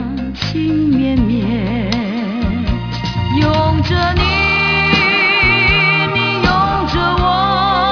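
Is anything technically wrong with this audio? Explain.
Yes, there's aliasing throughout the whole clip. It sounds like the audio was downsampled without a proper anti-aliasing filter, which fits a drop from 48 kHz to something like 11 kHz. Anything above the new 5.5 kHz limit folds back down into the audible band as unrelated tones, roughly 20 dB under the main sound. You hear it as a gritty, metallic edge on the bright parts, with the top end pressed hard against that 5.5 kHz ceiling.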